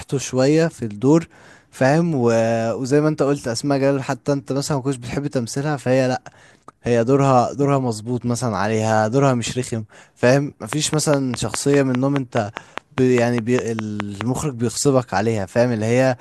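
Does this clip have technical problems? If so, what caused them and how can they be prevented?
Yes. From 10.73 to 14.22 s, a train of clicks ticks over the speech: roughly twenty sharp pops at a steady 4.9 per second, peaking about 15 dB above it. Likely interference or a faulty connection or power supply is injecting pulses. Route cables away from other equipment and use a stable interface.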